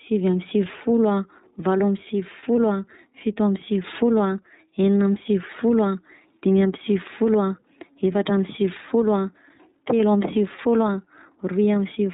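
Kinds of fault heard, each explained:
Gain pumping: The gain swings by roughly 5 dB as it clamps on louder speech, bringing loud and soft parts closer in level and leaving the level flattened and squashed. The likely cause is gain set far too high, with a fast limiter or compressor clamping down on every peak.
iLBC codec: The speech has a slightly rough, synthetic edge and nothing above 4 kHz, giving a narrow telephone-like tone. That points to the iLBC VoIP codec, coding each frame's excitation independently, and fits its 30 ms frame, 13.33 kbps mode.
Lost iLBC frames: At 2.39 to 2.43 s and again at 10.56 to 10.60 s, a brief held, faintly buzzy vowel-like sound replaces the speech for about 30 ms. The decoder is filling each gap, which fits a single lost frame, by repeating the last pitch cycle mixed with noise.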